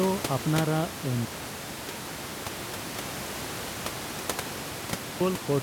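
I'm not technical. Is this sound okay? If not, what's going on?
No. From 1.25 to 5.21 s the speech almost disappears, likely one channel inverted, so the two stereo sides cancel each other out when played together.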